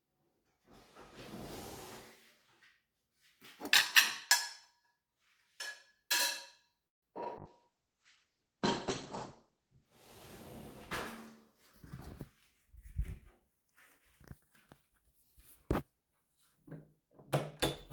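Everyday sounds, carried over a call, show four kinds of fault. At 6.87 s the audio stops for about 0.15 s, nearly all of it silence, then resumes where it left off with nothing lost. This is likely a call audio freeze, where delayed packets starved the jitter buffer, and a waveform shows a flat gap. At 7.24 s a short concealed packet loss leaves a brief smear or wobble where about 20 ms never arrived. The receiver papered over it with extrapolated sound before blending back, which appears as a tiny blurred patch on the spectrogram. From 7.39 s to 9.93 s a call bitrate drop takes the encoder from 48 to 10 kbps, and the sound turns rough and muffled. On a spectrogram the content above 8 kHz vanishes abruptly where it previously reached 20 kHz, then returns when the rate recovers. From 12.70 s to 14.00 s and again from 14.41 s to 14.91 s, jitter buffer speed-ups play the sound about 7 to 8 percent fast at unchanged pitch. 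The buffer is trimming small pitch-period slices to shed excess delay, roughly a tenth of a second in the first stretch and half that in the second. The waveform looks slightly compressed in time.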